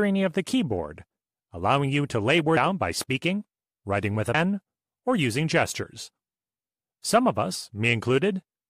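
At 4.34 s, after "speaking writing with a", compressed frames are skipped: about five 26.1 ms frames, roughly 150 ms of audio, are never decoded. The sound lurches forward with a brief smeared blip, seen as an abrupt spectrogram discontinuity. At 5.83 s, after "or using", a single frame drops the same way.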